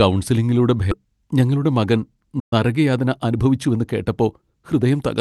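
At 0.91 to 0.93 s the speech skips ahead. Roughly a second of audio is gone. It was dropped in transit, or thrown out by an overflowing jitter buffer while later audio was already queued. Nothing fills the hole. The two sides are butted together almost directly, right before "ഞങ്ങളുടെ മകൻ". The listener hears a sudden jump in the flow, with no silence to mark it.

From 2.39 to 2.53 s there is a playback stall. Just after "ഞങ്ങളുടെ മകൻ", the output goes silent for 120 ms. The speech halts in mid-flow, then resumes. The likely cause is a player that ran short of data, or a playback thread that was briefly blocked. The gap is short but clearly audible as a dead pause where none belongs.

Two stretches show jitter buffer speed-up. From 2.86 to 3.77 s the speech runs at about 109% speed. Roughly a tenth of a second is trimmed away. From 4.20 to 5.20 s it runs at about 107%. In both, the buffer held more audio than its target. 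It shed tiny pitch-period slices, again and again, to cut the delay. Pitch stays put, but the talker sounds hurried. All of this passes through an Opus call path, whose coding noise and roll-off near 12 kHz point to a modest bitrate around 32 kbps.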